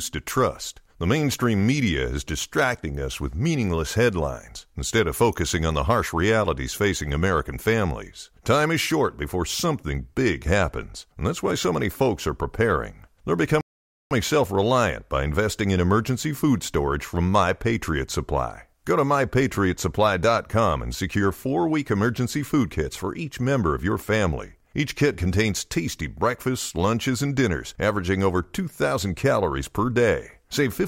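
At 13.61 s the speech halts in a rebuffering stall: the player exhausted its downloaded audio and waited about 0.5 s for more. It resumes at 14.11 s on "self reliant by investing" exactly where it stopped, so unlike a dropout, nothing is skipped, only time added.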